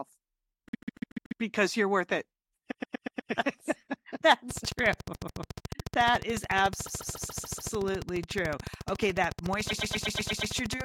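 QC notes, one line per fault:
0.69–1.41 s, 2.70–3.30 s, 5.13–5.41 s, 6.85–7.72 s, 9.69–10.53 s: repeated frames. A short block of compressed audio replays several times, so the speech stutters. Blocks last 144 ms, except 120 ms at 2.70 s and 9.69 s. Extra plays number 5, 5, 2, 6 and 7. Each join can blip. The repeats add 0.29 to 0.86 s each.
4.51–10.82 s: train of clicks. Regular pulses tick over the speech at about 13.9 per second, around seventy in all, and are audible in pauses too. They peak roughly 10 dB above the speech. The likely cause is interference from nearby equipment or a faulty connection or power supply.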